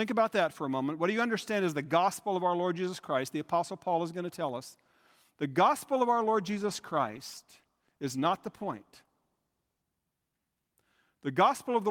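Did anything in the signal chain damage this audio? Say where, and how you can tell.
Yes. Right after "gospel of", from 6.16 to 9.89 s, there's a call bitrate drop. The speech turns coarse and grainy, which fits the encoder being pushed from around 64 kbps down to about 20 kbps after the network's bandwidth estimate fell, before the rate recovers.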